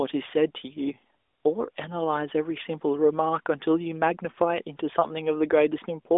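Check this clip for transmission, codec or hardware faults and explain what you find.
One fault is present: a lost AMR speech frame between 5.00 and 5.11 s, heard as a brief dip or warble in the speech. This fits a single 20 ms frame failing its check. The decoder repeats the previous pitch and vocal tract settings at lower gain, so the speech briefly sags and comes back weak or rough. A waveform shows a short envelope dip. A spectrogram shows the harmonics held flat there, within the narrowband line's 3.6 kHz ceiling.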